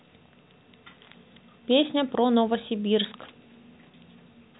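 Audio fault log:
No faults heard anywhere in this speech.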